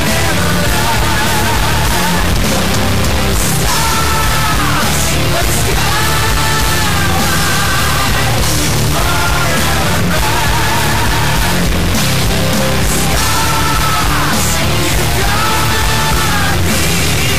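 Harsh, buzzy distortion runs through the whole clip and loud noise fills the pauses, likely from a stuck bit high in the word, with a step of around -10 dBFS.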